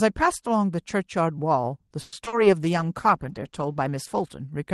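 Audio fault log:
2.01–2.14 s, call audio freeze: Packets were likely held up in transit, starving the jitter buffer, so the receiver stretched the last speech sound into a fading buzz for about 110 ms. Playback then resumed where it stopped, losing nothing but running 110 ms later.
2.24–2.28 s and 2.28–2.34 s, short concealed packet loss: Two back-to-back holes of 20 ms and 40 ms reached the decoder too late and were patched by extrapolating the preceding speech, then crossfaded back. The speech briefly smears or wobbles, and anything spoken inside those 60 ms is gone.
2.61–4.36 s, call bitrate drop: The sender's bandwidth estimate fell and the Opus encoder, which had been running at 32 kbps with a 12 kHz audio bandwidth, was cut to 16 kbps, holding the lowest rate for about 1.69 s. The coarser coding makes the speech rougher and more watery, and duller in the top end, until the rate climbs back.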